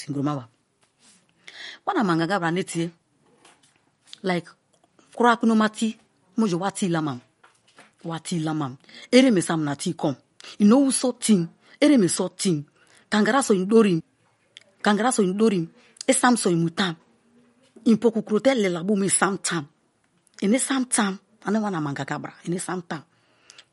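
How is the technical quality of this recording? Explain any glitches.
The technical quality is poor, with constant codec damage and one playback glitch.

Throughout, the speech sounds watery and swirly, sibilants turn metallic, and nothing is heard above 11.2 kHz. This is likely MP3 compression at a low bitrate, around 49 kbps. Short of bits, the encoder cuts the treble and drops weak frequency components frame by frame.

At 14.00 s there is a CD skip. A disturbance made the laser jump to another turn of the disc's spiral, so playback briefly mutes for a few milliseconds. It is heard as a tick and an abrupt jump in the speech.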